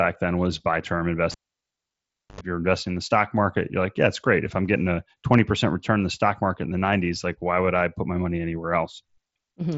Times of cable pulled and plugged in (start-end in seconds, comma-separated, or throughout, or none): 1.31-2.41